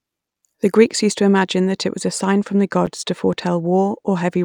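From 0.74 s onward, channel delay (comb filtering) sets in: one channel lags by a couple of samples, so the mono sum cancels around 10 kHz, dulling the top. At 2.86 s, a 7.3 ms gap at a join of encoded pieces opens: encoder padding leaves brief silence with smeared edges, and the sound resumes exactly where it stopped, with nothing lost.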